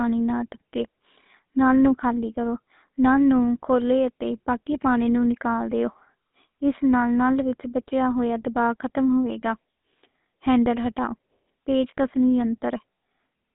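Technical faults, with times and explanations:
Throughout: GSM full-rate codec. The speech has a buzzy, gravelly roughness. The codec rebuilds the voice from a vocal-tract model excited by sparse, regularly spaced pulses. A spectrogram shows nothing above about 3.8 kHz, a line band of roughly 200 Hz to 3.7 kHz, and smeared harmonics, which fits a 13 kbps GSM full-rate coder.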